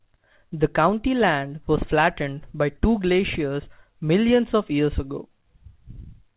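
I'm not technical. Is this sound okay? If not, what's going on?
Yes, this speech sounds fine, with nothing going wrong in it, just the narrow, muffled quality you'd expect from an ordinary phone line.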